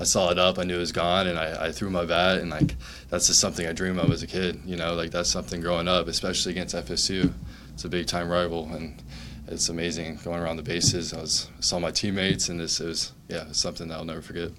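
No technical faults are audible anywhere in the audio.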